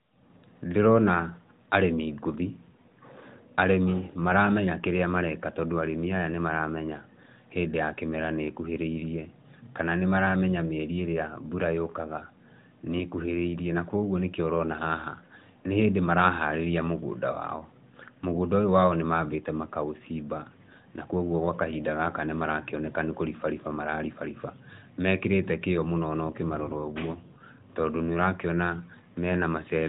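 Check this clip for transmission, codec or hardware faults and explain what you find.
Nothing here points to a transmission, codec or hardware fault; the speech simply carries the narrow, phone-like band of the AMR narrowband mobile codec, with only light coding roughness that fits its higher 12.2 kbps mode.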